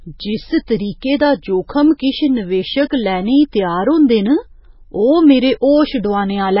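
From start to finish the speech carries heavy damage that most likely comes from MP3 compression at a very low bitrate, around 16 kbps. Everything above 5.5 kHz is gone, leaving a flat ceiling on a spectrogram with speckled, flickering gaps below it. Sibilants sound watery and swirly, and attacks smear.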